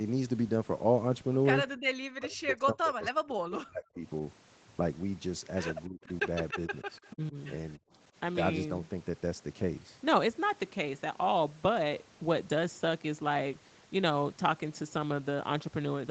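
From 1.81 to 4.03 s the speech sinks and breaks apart, the deepest dips reaching roughly 40 dB and about two seconds in total affected. This is speech suppressed in double talk, likely from an echo canceller that heard both sides at once and turned this talker down with the far-end echo. On a spectrogram the harmonic bands thin out and vanish in ragged patches. The waveform envelope collapses in uneven bites.

Shorter dips of the same kind follow at 5.87–6.09 s (about 25 dB), 6.53–6.89 s and 7.13–7.36 s (about 15 dB each), each totalling around 150 ms. Each is likely the canceller ducking briefly under renewed double talk. They show as narrow vertical gaps or faded columns in the spectrogram and small notches in the envelope.

Between 6.91 and 7.12 s a faint delayed copy of the voice comes through, lagging 288 ms and sitting roughly 30 dB below the direct speech. This echo leak likely comes from residual loudspeaker sound that the far-end canceller failed to remove. 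On a spectrogram it looks like a weak ghost of the preceding harmonic pattern, shifted right by that delay. In the waveform it is a low-level smear.

At 7.79–7.92 s the room sound drops by about 26 dB for roughly 150 ms, then returns. This is background gated by the echo canceller, which clamped the microphone while the loudspeaker played. The noise floor shows a sudden dark notch across all frequencies below the 8 kHz ceiling of the call path, and the quiet part of the waveform flattens into a short near-silent stretch.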